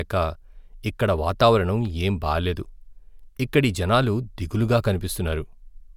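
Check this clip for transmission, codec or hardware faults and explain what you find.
Nothing stood out on listening to this speech recording.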